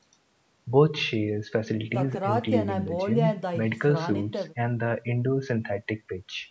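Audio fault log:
No faults heard anywhere in this speech recording.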